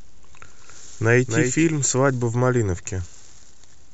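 From the start to 1.64 s the speech has a doubled audio track: a flat copy, about 5 dB quieter, trails about a third of a second behind, then cuts off abruptly, likely from a second, slower capture path.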